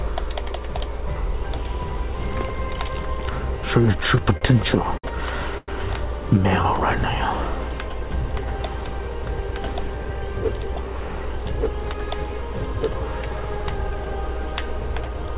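From 3.92 to 5.05 s there's a run of repeated stalls, a stutter: seven short hitches totalling 141 ms, the longest 60 ms. The jitter buffer kept running dry, so the receiver stretched the last bit of sound each time. The audio drags and catches.

At 5.57 to 5.69 s comes a call audio freeze, about 102 ms of filled sound, with the final 30 ms dropping to silence. This likely comes from packets held up in transit, which left the buffer empty. The held sound fades out, then the audio resumes where it stopped.

Between 10.10 and 12.11 s there's a jitter buffer speed-up. The buffer had built up extra audio, so the receiver trimmed tiny pitch-period slices, around 70 ms in all. Playback runs at 103% with the pitch unchanged. Throughout the clip, nothing is heard above 4 kHz, which fits a G.711 call path.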